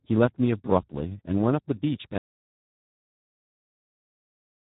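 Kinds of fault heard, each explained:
Speex codec: The speech carries the rough, hoarse texture of a low-rate CELP coder that has too few bits to rebuild the excitation properly. The damage here is heavy, which fits an 8 kbps setting, and nothing is present above 3.8 kHz.
Audio dropout to silence: At 2.18 s the speech cuts off mid-flow and the rest of the clip is silent, with no room tone left. The likely cause is lost input, with the recorder continuing to write silence.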